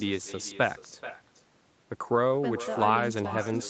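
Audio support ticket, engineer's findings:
Echo with no canceller, throughout the speech. Every phrase is shadowed by a delayed copy, roughly 0.4 s later and about 13 dB down. The copy sounds thinner. Far end is playing the call on a loudspeaker. Its microphone picks that playback up and returns it over the network. No echo cancellation removes it. Audio is band-limited to 8 kHz by the call path.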